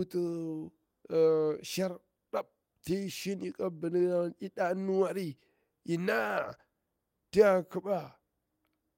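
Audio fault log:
Nothing to log here; the speech comes through without a single glitch worth noting.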